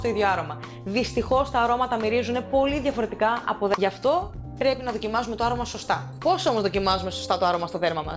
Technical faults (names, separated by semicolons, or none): skip ahead; jitter buffer speed-up